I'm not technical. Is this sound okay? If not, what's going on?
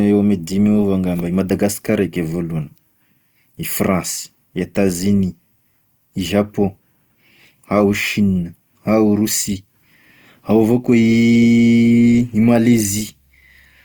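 No. Opus compression damage runs through the whole clip, from start to finish. The speech sounds rough and grainy rather than clean, most likely because it was squeezed hard by the Opus format. When there isn't enough data to describe every part of the sound, the encoder fills the gaps by copying lower parts upward or adding noise. The top end stays open, but the detail inside it turns coarse and hissy.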